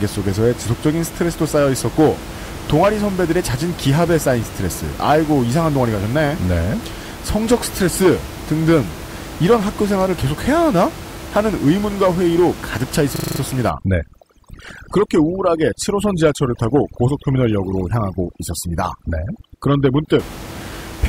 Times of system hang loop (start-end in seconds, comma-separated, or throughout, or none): 13.16-13.40